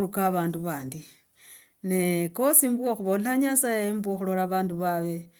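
The speech comes through Opus voice compression in its hybrid mode at 24 kbps, keeping the full audio band up to about 20.2 kHz, with no technical faults to point to.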